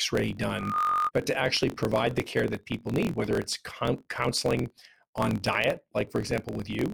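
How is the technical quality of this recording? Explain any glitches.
The recording has two clear technical problems: a buzz and slight speed-up running through the whole speech, and a brief feedback squeal near the start.

Throughout, a steady buzz at about 45.9 Hz sits under the speech, which also runs about 1.07 times faster than normal while keeping roughly its natural pitch. This is a block size mismatch (truncated). One stage writes longer blocks than the next reads, which fits 1024-sample blocks, so the tail of each block is discarded. Those regular cuts produce the buzz, and the missing material shortens the timing.

From 0.50 to 1.11 s, a single tone at 1.2 kHz swells over roughly a third of a second until it stands a few decibels above the speech, then stops. This is loudspeaker feedback squeal. The microphone was picking up the loudspeaker it was feeding, and at that one frequency the loop's gain exceeded one, so the tone reinforced itself on each pass.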